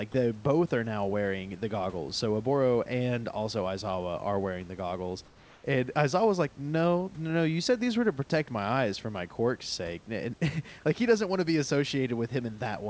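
A speech recording with a brief comfort noise in place of the background. From 5.26 to 5.64 s, just after "are wearing the goggles", the room tone, which sits about 31 dB below the speech, gives way for about 380 ms to a smooth, featureless hiss roughly 3 dB quieter before the real background returns. The likely cause is discontinuous transmission: the sender stopped sending during the pause and the receiver synthesized shaped noise to fill it. Nothing in the call path reaches above 8 kHz, which fits G.722 at 64 kbps.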